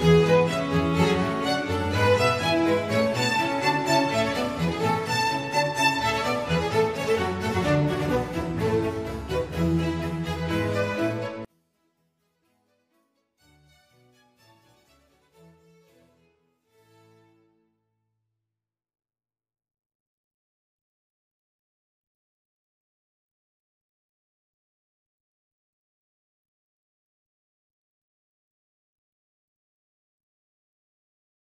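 One channel inverted, from 11.45 s to the end of the clip at 31.53 s: the sound collapses by about 38 dB when the two channels are summed to mono, leaving only a faint residue where the audio had been. The likely cause is reversed polarity on one stereo channel, so everything common to left and right cancels in the sum. The deep drop shows the channels are nearly identical, leaving little difference signal to survive.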